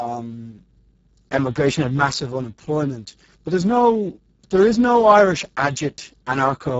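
This speech clip sounds hoarse, grainy and partly robotic from start to finish, with the upper range above about 4 kHz heard only as a hissy, shaped fill and no content at all above 7.7 kHz. These are heavy Speex codec artefacts. At such a low setting, which fits a bitrate of about 6 kbps, this CELP coder has too few bits to model the excitation, so the voice drifts toward a vocoder-like buzz.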